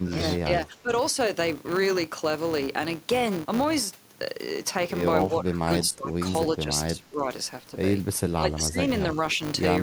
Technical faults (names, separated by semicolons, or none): filter restarted on every block; speech suppressed in double talk